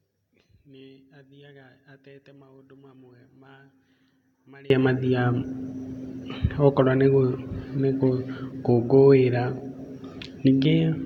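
One channel inverted, from 0.0 to 4.7 s of this speech clip: when the stereo is folded to mono, the centred voice drops by about 29 dB and survives only as a faint residue before returning at full level. The likely cause is reversed polarity on one of the two channels, so the material common to both cancels on summing, leaving only their small differences audible.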